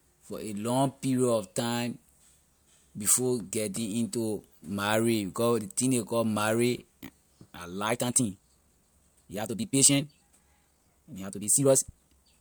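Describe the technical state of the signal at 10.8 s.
At 10.8 s you're inside a time-stretched section running from 7.86 s to the end, sped up about 1.81 times, likely by dropping short chunks to keep pitch, so it sounds rushed.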